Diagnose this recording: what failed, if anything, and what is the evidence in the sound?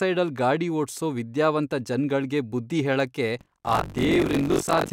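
A driver or buffer failure: from 3.39 s to the end, buffer tearing sets in, as writer and reader cross inside each period. About a third of every buffer replays audio roughly 40 ms old, producing a rattling 46.9 Hz buzz on the speech, which fits a 1024-sample buffer.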